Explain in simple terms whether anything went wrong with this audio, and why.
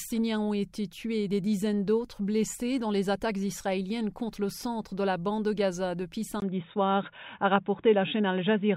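At 6.40 s, after a brief gap of about 20 ms, the sound suddenly turns dull and boxy and stays that way to the end. Nothing above 3.8 kHz gets through, the loudness shifts noticeably, and a faint new background hiss appears. The likely cause is an input switched to a poorer device, such as another microphone or a headset. A simple muffling filter wouldn't bring its own hiss, level change and gap.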